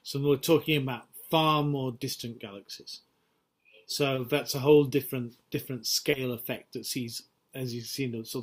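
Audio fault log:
4.15–4.19 s and 6.11–6.15 s, short concealed packet loss: two brief gaps of about 20 ms each where a piece of the audio did not arrive in time to be decoded. The receiver filled each hole by extending the preceding sound, carrying on its pitch if it was tonal or generating shaped noise if it was not, then blended back into the real signal. The result is a momentary smear or wobble at each point, and a very short sound there can drop out entirely.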